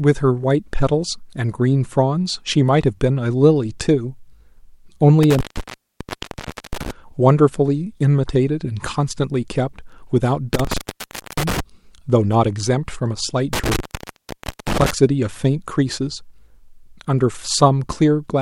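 Intermittent contact at 5.23–6.91 s, 10.54–11.60 s and 13.53–14.91 s: a loose connection drops the speech for 1.3, 0.61 and 0.91 s, leaving near-flat waveform gaps bracketed by crackle spikes, with faint hiss inside.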